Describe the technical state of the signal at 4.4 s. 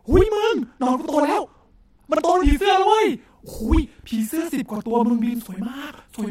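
At 4.4 s the speech carries a channel delay, heard as doubling. It runs through the whole clip, not just this moment. One channel arrives about 46 ms late, which fits a 2048-sample buffer. The two channels are then summed to mono. At that gap the ear no longer fuses them. So each syllable is followed by a second copy at the same level, like a short slap echo.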